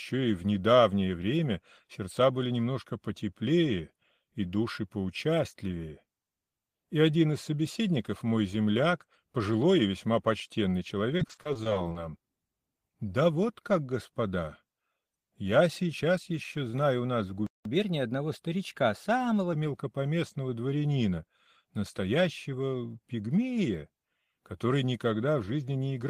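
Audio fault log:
11.17–11.97 s, repeated packet loss (robotic sound): twelve gaps of up to 20 ms each were patched by repeating the last sound, about 30% of the span. It sounds choppy, with pieces missing.
17.47–17.65 s, playback stall: the sound drops out for about 0.19 s. The likely cause is the player running out of data before it resumed.
17.65–19.53 s, catch-up at higher speed: the backlog plays at 1.1 times normal speed, pitched up by roughly one and a half semitones. It then settles back to normal.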